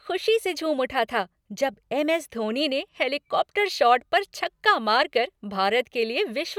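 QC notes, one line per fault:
No faults found in this speech recording. Nothing here needs a QC flag.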